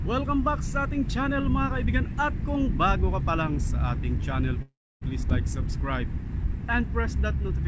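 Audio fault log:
4.62–5.03 s, call audio freeze: packets were likely held up in transit, emptying the jitter buffer. The receiver stretches the last sound into a fading fill lasting about 0.4 s, silent for roughly 0.27 s, then resumes exactly where it stopped, with nothing lost but the timing pushed later.
5.29–5.32 s, skip ahead: roughly a tenth of a second of audio was discarded while later audio was already queued, so playback jumps forward with only a few milliseconds of fill. The two sides are joined almost directly, and the band-limited call sound, empty above 8 kHz, continues after the jump.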